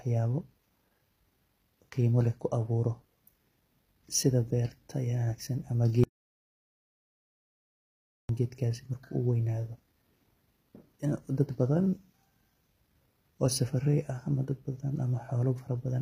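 From the start the speech has a gritty, plainly metallic treble, with s sounds going lispy and nothing at all above 15.5 kHz. That points to HE-AAC compression, likely at a low bitrate around 24 kbps, with the top end rebuilt from copied lower bands rather than coded.

Then at 6.04 s, right after "sidja berta wanagsan ama", there's an audio dropout to silence: dead silence with no room tone for about 2.26 s, until "geedkas uweynado" comes in at 8.29 s. The input was likely lost while recording carried on.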